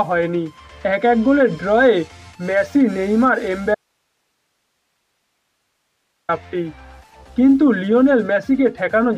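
At 3.75 s the sound drops out abruptly and doesn't return until 6.29 s, about 2.5 s of audio dropout to a faint residue. Only hiss remains, far below the signal, which likely means the feed broke while the downstream path stayed live.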